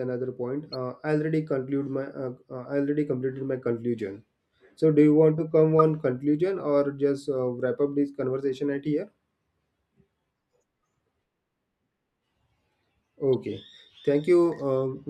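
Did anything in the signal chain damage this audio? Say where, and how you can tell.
Yes, in the codec: corrupt frame decoded. Damaged frames at 0.73 s (about -30 dBFS) and 5.79 s (about -20 dBFS), between "you want to come" and "conclusion or just uh". Flipped bits misplaced energy for a few frames.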